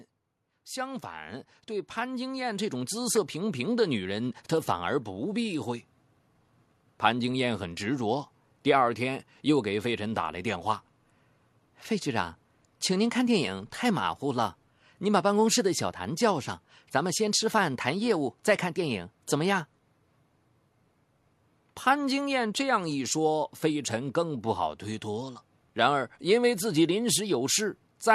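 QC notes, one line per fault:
0.50–5.64 s, automatic gain rising: the level of the speech and the background noise floor swells together by about 12 dB over roughly five seconds. The automatic gain control judged the input too quiet and raised its gain gradually, lifting everything equally.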